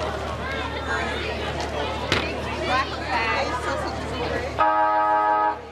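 At 4.23 s there's a short, bright blip in the audio, peaking around -25 dBFS: a corrupt frame decoded. Flipped bits in what sounds like a handful of compressed frames made the decoder put energy at the wrong frequencies, giving that brief squeaky burst.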